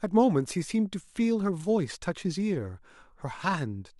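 Speech recording, no technical faults heard.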